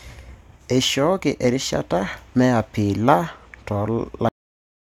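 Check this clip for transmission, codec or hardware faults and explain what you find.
There is one fault: a cut-off end. At 4.29 s the speech stops mid-sound and drops straight to digital silence, with no natural decay. The final buffers were never written or played back. The waveform ends in an abrupt vertical edge, and the spectrogram shows every frequency vanishing at once.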